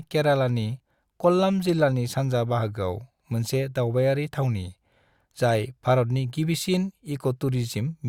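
Speech recording, no audible technical faults anywhere in the clip.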